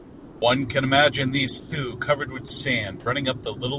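From 0.00 to 0.42 s, comfort noise in place of the background: a steady, featureless hiss about 3 dB quieter than the real room tone, likely discontinuous transmission. Unlike a dropout, nothing of the speech is missing. At 1.60–1.72, 3.00–3.06 and 3.44–3.46 s, sound dropped by the voice detector: sound vanishes into that same flat noise for 80, 30 and 20 ms, likely the voice detector mistaking sound for background.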